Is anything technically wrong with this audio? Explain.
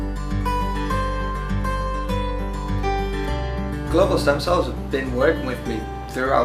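No, nothing is technically wrong with this audio.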